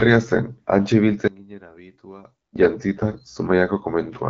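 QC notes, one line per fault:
1.28–2.56 s, one channel inverted: the speech drops by about 20 dB to a faint copy. This is likely one stereo channel with reversed polarity: summing to mono cancels the shared centre content, leaving only the small difference. The waveform shrinks sharply; the spectrogram fades.
2.94–3.16 s, AMR bit errors: for about a fifth of a second the speech keeps its pitch and level but goes hoarse, scratchy and gargly. Corrupted lower-priority bits, around a tenth of them, misplace the excitation pulses and skew gain and spectral values, which fits a run of about eleven damaged frames. The spectrogram shows smeared, noisy harmonics.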